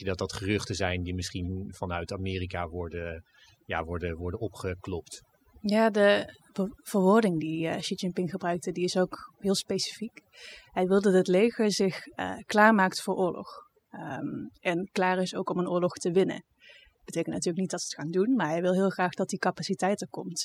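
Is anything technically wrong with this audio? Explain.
Yes. Throughout this speech clip there is overdone noise removal. A noise reduction process was pushed too hard. It cuts individual frequency bands sharply whenever their level sits near its noise estimate, and that takes the quieter parts of the voice with them. The background in the pauses drops, broken by twinkling, chirpy specks. On a spectrogram the background looks scooped out and scattered with isolated dots, and the voice's weaker harmonics break into patches.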